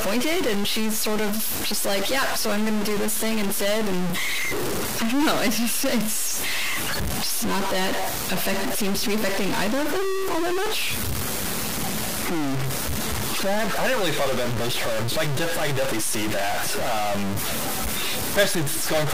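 From start to finish the speech carries harsh, buzzy distortion, and the pauses fill with a steady noise floor rather than falling silent. This points to a stuck bit, likely one data line held fixed, offsetting about half the samples by a step near -20 dBFS.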